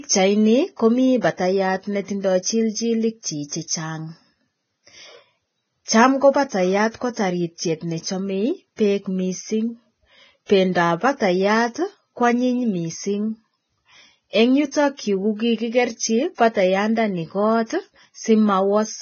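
The speech was most likely passed through Vorbis compression at a very low bitrate, and the damage runs from start to finish. Throughout, nothing is present above about 6.5 kHz, and the treble below that cut-off is heavily degraded, consistent with a rate near 17 kbps. The encoder coarsely quantises the high-frequency residue so that fine detail turns into noise of similar energy, leaving the speech hissy and grainy, with roughened tones and smeared consonant onsets.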